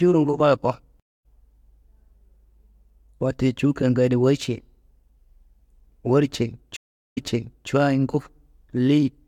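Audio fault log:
1.00–1.26 s and 6.76–7.69 s, stream reconnect: the connection dropped, leaving silent gaps of 0.25 s and 0.40 s, and a fresh decoder restarted mid-stream. The first resumes slightly later, skipping sound. The second resumes 0.53 s earlier, repeating sound. Spectrogram and waveform show blank gaps and brief fade-ins.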